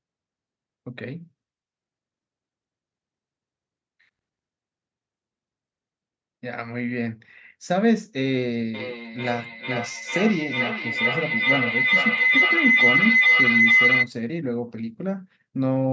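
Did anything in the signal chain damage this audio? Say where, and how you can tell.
Yes. A feedback howl appears in the call path from 8.74 s to 14.13 s. A tone near 2 kHz swells and pulses about every 0.4 s. It peaks about 7 dB above the speech. Two devices share one room, and each microphone-to-loudspeaker trip adds gain, so the repeats build.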